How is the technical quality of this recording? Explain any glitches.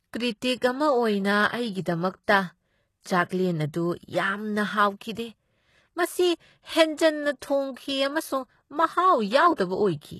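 The quality is fairly compromised. Throughout, the speech's treble sounds synthetic, s sounds go gritty and lispy, and nothing reaches above 12.3 kHz. That's likely HE-AAC compression at a low bitrate, around 16 kbps, rebuilding the top end from copied lower bands.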